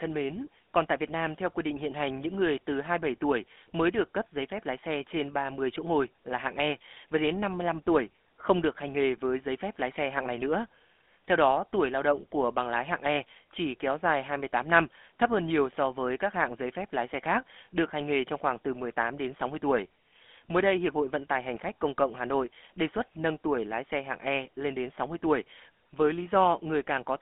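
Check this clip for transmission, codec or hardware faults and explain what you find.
One fault runs throughout: GSM full-rate codec. The speech is rebuilt from a vocal-tract filter driven by sparse, regular pulses, so it sounds plainly buzzy and gravelly, which fits a 13 kbps GSM link. A spectrogram shows energy only from 250 Hz to 3.5 kHz, nothing above 3.8 kHz, with coarse, smeared harmonics.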